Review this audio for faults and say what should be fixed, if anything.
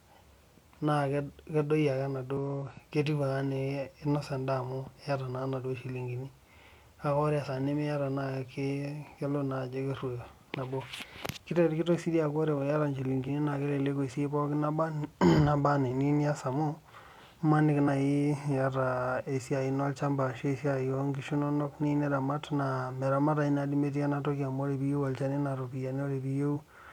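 Short chirps and blips interrupt the speech at 2.37 s, 7.43 to 7.49 s, 13.24 to 13.28 s, 17.84 to 17.89 s and 26.52 to 26.58 s. This is damaged data in a compressed stream: corrupted bytes made the decoder misread those frames, lose sync and jump ahead to the next frame header. To prevent it, carry the file or stream over a checksummed, error-checked transfer and keep metadata out of the audio payload.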